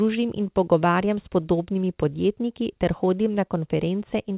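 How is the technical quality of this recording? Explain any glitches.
The speech carries small timing corrections caused by a clock mismatch over the call link, heard through a narrowband channel with nothing above 4 kHz, consistent with G.711 telephony coding.

Clock drift between sender and receiver runs through the whole clip. The sender's clock runs roughly 3 percent slow relative to the receiver, so the jitter buffer keeps draining. The receiver must stretch what arrives, which leaves small timing hiccups recurring at uneven intervals.

Repeated timing corrections occur from 0.47 s to 3.60 s. To stay in step with the slow sender, the receiver repeatedly repeats short pieces of audio, all in the same direction and unevenly spaced, adding roughly 70 ms in total. Playback runs at about 98 percent speed, and each edit is small.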